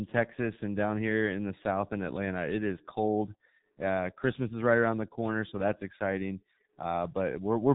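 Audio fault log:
throughout G.723.1 codec: speech is heavily muffled and hoarse, with nothing above 3.8 kHz and smeared consonants. The sound fits a coder near 6.3 kbit/s with 30 ms frames. Unlike a plain low-pass filter, its coarse, slowly updated voice model adds roughness, not just dullness.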